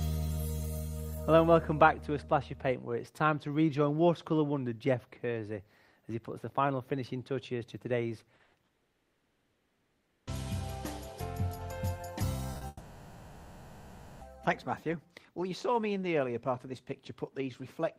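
At 8.35 s a short concealed packet loss blanks about 40 ms, running to 8.41 s. The receiver fills the gap by extending the preceding sound and then crossfades back into real audio, which leaves a brief smear or wobble where something very short may have dropped out.

Immediately after, from 8.43 to 8.55 s, a burst of packet loss removes 100 ms in one piece. Concealment covers the whole gap with no silence. The last sound is stretched and tapers as a held buzz or fading hiss, and playback then resumes past the lost section.

A long network dropout follows at 8.65 s and lasts until 10.29 s, 1.62 s of missing audio. After the first few milliseconds of fill, about 1.61 s is plain silence before sound returns, with everything in between gone. The likely cause is a stall in delivery, with no packets arriving for that stretch.

At 12.53 s two short concealed packet losses come back to back, 20 ms and then 40 ms, ending at 12.63 s. 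They produce a quick double smear or wobble.

A second long network dropout runs from 12.67 to 14.23 s, with 1.54 s missing. Unlike the first, it contains only about 10 ms of silence. For almost its entire length the gap is filled with continued, synthesised sound rather than going quiet, before the real audio resumes further on.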